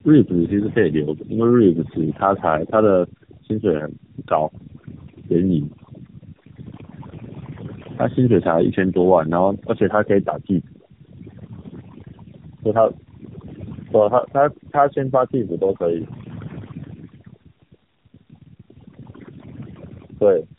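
Right from the start and all the way through, there's overdone noise removal at work. The denoiser was pushed so hard that any frequency band sitting close to its noise estimate gets pulled down or shut off entirely. The background collapses into near silence with little twinkling specks popping in and out, and the quieter parts of the speech get dragged under with the noise.

On top of that, across the whole clip, you can hear tandem speech coding. The speech sounds like it went through a narrowband mobile codec, then a plain telephone link, then the mobile codec again. That fits two passes of an AMR-NB-style coder at a low rate, likely somewhere near 8 kbit/s. The second coder is working on audio the first one already mangled, so the roughness and warble stack up. The speech ends up more muffled and gritty than one codec alone would make it, and there's nothing at all above 3.8 kHz.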